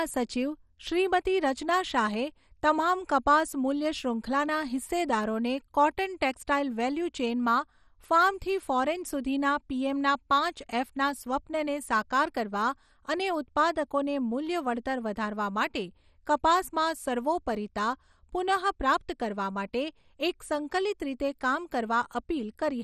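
Throughout, the speech was likely starved of bits by MP2 compression at a rate near 56 kbps, so upper sub-bands vanish above 13.9 kHz, leaving heavy, dull, gurgling granularity.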